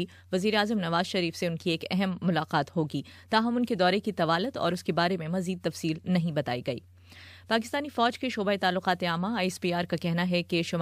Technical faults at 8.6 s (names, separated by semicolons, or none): none